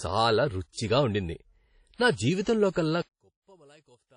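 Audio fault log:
Throughout: WMA compression, likely; plainly audible washy ringing and breathing hiss, nothing above 10.1 kHz, which fits a low bitrate around 32 kbps.
0.70, 1.95, 2.42, 2.73 s: pre-echo; hiss smears 31 to 59 ms ahead of sharp attacks, because block-wide quantisation noise fills the quiet before them.
3.02 to 4.17 s: one channel inverted; everything, background included, drops about 33 dB, likely from reversed polarity cancelling the shared sound in the mono sum.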